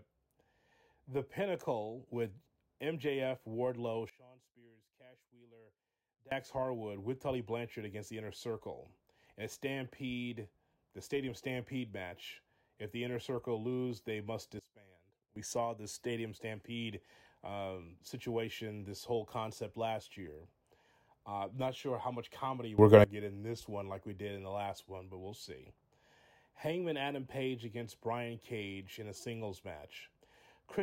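Sudden gain jumps occur at 4.10–6.32 s (down about 23 dB), at 14.59–15.36 s after "circle lose they must" (down about 21 dB), and at 22.78–23.04 s before "to get in this" (up about 21 dB). The speech and background noise step in level together, likely from digital gain applied instantly without a ramp.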